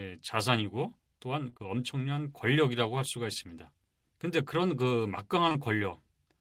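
Speech with two brief smeared, wobbly patches, at 1.49 to 1.61 s and 5.49 to 5.60 s. They are short concealed packet loss: 20 ms chunks failed to arrive in time, so the decoder extended the preceding sound and blended back, stretching the second spot slightly.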